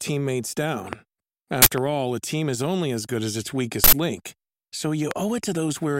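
At 0.93 to 0.95 s a loud pop cuts through the speech. It is a single sharp click, far louder than the talking, which continues beneath it. The likely cause is a sudden voltage step, such as a switch transient or static discharge, entering the signal chain. On a waveform it shows as one tall, narrow spike. A spectrogram shows a thin vertical line spanning the whole frequency range.

From 1.62 to 1.66 s comes an uninitialised buffer: a block of memory was played before any audio had been written to it, so whatever data was left there came out as sound. The result is a harsh blast of digital noise lasting about 43 ms, which fits a 2048-sample block. The waveform fills with dense hash, and the spectrogram shows a bright rectangular slab.

A second identical pop follows at 1.78 to 1.80 s.

The second uninitialised buffer, from 3.84 to 3.93 s, runs about 85 ms, which points to a 4096-sample block. 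Its slab on the spectrogram is twice as wide.

A final pop at 5.11 to 5.13 s is the loudest of the three, roughly 20 dB above the speech, and appears as the tallest spike on the waveform.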